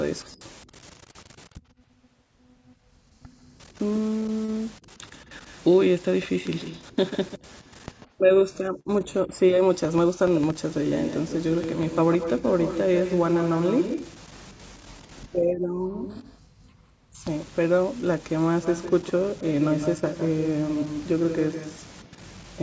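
A delayed copy of the speech trails behind it at 0.92–1.01 s, 3.74–4.00 s, 4.96–8.08 s, 8.74–9.35 s and 10.34–16.43 s, about 140 ms late. This is echo leak, likely a far-end loudspeaker whose echo canceller failed to remove it. It is faint at first, then only about 10 dB below the speech from 10.34 s. At 15.55–15.77 s the background is gated by the echo canceller, dipping by up to about 40 dB for roughly a fifth of a second before returning. The echo returns at 18.62–22.55 s, now about 157 ms behind and again only about 10 dB down.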